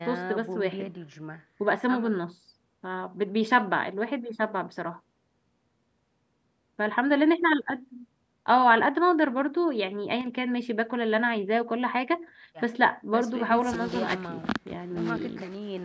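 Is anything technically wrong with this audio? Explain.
Yes. From 10.21 to 10.26 s the speech abruptly dips by about 6 dB, likely because one channel drops out briefly before the stereo signal is summed to mono. The band ending at 8 kHz comes from call microphone processing and is expected.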